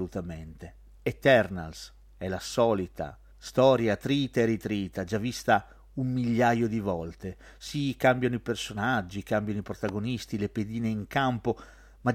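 A speech recording carrying a single loud pop from 9.89 to 9.91 s, a sharp thump standing roughly 10 dB above the speech level. What marks it as a pop rather than a dropout or a digital click is that the speech carries straight on beneath it with nothing missing, and it is one broad pulse instead of a hairline tick. The cause is likely a voltage spike from a plug, switch or static discharge entering the signal chain.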